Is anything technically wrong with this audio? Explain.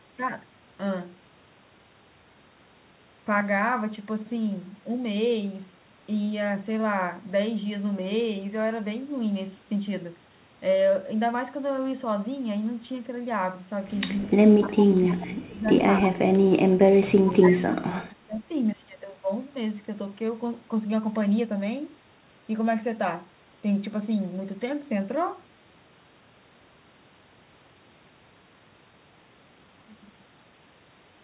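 Yes. There are two related faults in the middle of this speech clip, between about 14 and 19 seconds.

Echo leak appears at 14.21–14.29 s, 14.61–14.86 s, 16.04–16.08 s and 17.27–17.31 s. Brief, faint copies of the speech return about 293 ms late. The first is roughly 30 dB below the direct speech and the others roughly 15 dB below. The likely cause is a far-end loudspeaker whose echo canceller let residue through. A fixed 293 ms delay in short scraps marks this as echo rather than room reverberation, which would trail off continuously.

Speech suppressed in double talk occurs at 14.64–15.68 s, 16.09–16.18 s and 17.35–18.51 s, overlapping or directly following the echo scraps. The talker's level sinks by as much as roughly 30 dB in the two longer stretches (about a second each) and roughly 20 dB in the short one. This is likely the echo canceller mistaking the talker for echo and attenuating both. 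The sound dips, loses its high end or cuts out in pieces, all within the 4 kHz band of the call.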